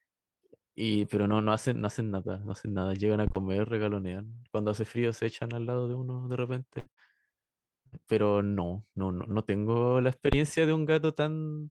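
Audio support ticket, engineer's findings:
Phantom power thump at 3.27 to 3.42 s and 10.33 to 10.42 s. Deep low thump, decaying in about 32 ms, then 21 ms. Probable cause: phantom or supply switched on or off on a live input. The voltage step passes through the coupling capacitors.

Burst of packet loss at 6.79 to 6.89 s, 6.92 to 7.00 s and 7.87 to 7.95 s. Each time the receiver stretches the last sound for about 53 to 62 ms, fading it, then skips ahead. Roughly 60 ms of speech is missing at each gap.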